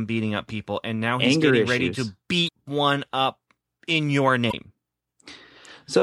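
At 2.44 to 2.49 s, just before "one up in your", and again at 4.48 to 4.53 s, just after "one up in your", the speech breaks into a short glitch lasting about 50 ms. This is damaged data in a compressed stream: the decoder hits corrupted frames, misreads them, and loses sync until it finds a clean frame header. Each event is brief.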